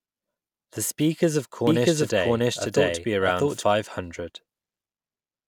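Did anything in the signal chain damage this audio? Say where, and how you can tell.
Yes. A doubled audio track runs from 1.67 s to 3.63 s, starting just after "speakers of". A second full-band copy of the speech trails the original by about 0.7 s at roughly the same level. It has no decay or added room colour, and it switches in and out abruptly at both ends. That points to a likely fault at the driver or buffer stage, where the same signal was picked up again through a slower path and summed with the direct feed.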